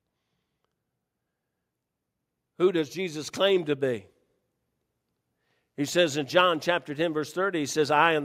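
From 2.93 s to 4.1 s the level creeps upward, with the voice and the background noise beneath it swelling together by about 4 dB over a little more than a second, so the room seems to move closer rather than the talker getting louder. This is automatic gain rising: the automatic gain control judged the incoming signal too quiet and lifted its gain gradually, raising everything it hears at once.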